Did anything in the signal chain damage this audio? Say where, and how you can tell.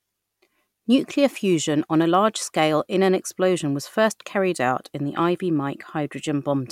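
No, nothing in the signal chain audibly damaged this speech recording, and the signal shows no sign of a fault at any stage between capture and playback.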